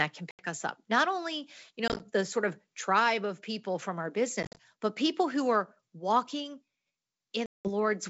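At 0.31, 1.88, 4.43 and 7.46 s, packet loss on an ADPCM call leaves hard-edged silent gaps, seen as flat waveform and blank vertical strips. The decoder's predictor and step size fall out of step, so the speech returns slightly distorted briefly.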